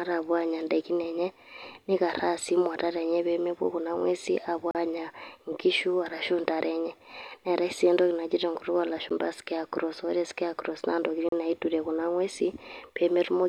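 Three sharp dropouts cut the speech to dead silence and back. From 4.71 to 4.75 s a hole of about 38 ms lands just before "anya inkiishu arashu". At 9.09 s a briefer gap of about 12 ms sounds like a single tick. From 11.29 to 11.32 s a 35 ms hole falls between "scarecrow naa" and "naiturie kuna ing'uesi". Each is a block of digital silence, with samples replaced by zeros without any fade. The 12 ms gap fits a 512-sample buffer that went unfilled.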